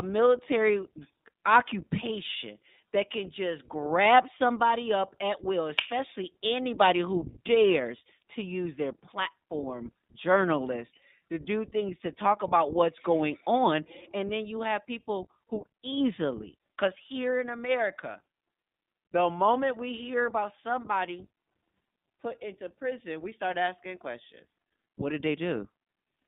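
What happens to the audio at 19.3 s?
At 19.3 s the speech carries iLBC codec damage, as it does for the whole clip. Each 20 ms frame is coded independently. Only about 150 Hz to 3.7 kHz survives. The voice sounds muffled, rough and a little synthetic, with the damage plainly audible, which fits a rate near 15.2 kbps.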